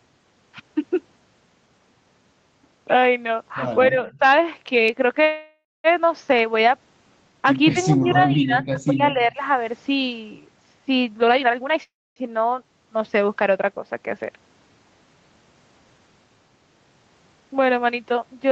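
From 3.9 to 4.22 s the speech dips by roughly 15 dB, likely speech suppressed in double talk: the echo canceller attenuated the talker along with the far side, leaving a faded band on the spectrogram.

At 5.23 s a call audio freeze begins. The last sound is stretched into a decaying buzz, then about 0.19 s of flat silence in the waveform, and the speech resumes at 5.87 s. This is likely the jitter buffer running dry, which inserts a 0.61 s gap while losing nothing.

From 7.73 to 9.41 s the suppression returns for about 1.5 s in total, with dips of roughly 15 dB that thin and chop the speech.

Inside that stretch, at 8.09 s and 8.59 s, faint copies of the speech appear about 210 ms behind the original, at about 15 dB and 20 dB below it. This is likely echo leak from a loudspeaker the canceller didn't fully cancel, showing on the spectrogram as weak, displaced duplicates of the harmonic pattern.

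From 11.21 to 11.8 s a jitter buffer speed-up plays the audio at 173% with unchanged pitch. The buffer drops pitch-period slices to cut roughly 0.4 s of delay, so the speech sounds rushed and the spectrogram looks compressed in time.

A second call audio freeze follows from 11.83 to 12.19 s. It holds a fading tail, then about 0.26 s of silence, and inserts a 0.33 s gap.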